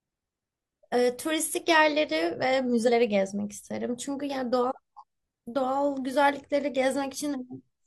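Damaged data in a compressed stream at 2.84–2.90 s, 4.97–5.03 s and 7.29–7.35 s: corrupted frames throw the decoder out of sync, producing brief glitches in the speech.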